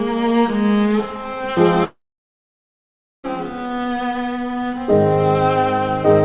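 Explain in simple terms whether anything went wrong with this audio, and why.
At 1.84 seconds the sound suddenly turns into a short fading buzz, then goes completely quiet for a little over a second before returning at about 3.26 seconds, with roughly 1.4 seconds simply missing. This is a long network dropout, most likely a gap in the data reaching the listener. The receiver briefly stretched the last bit of sound to hide the gap, gave up, and played silence until audio started arriving again.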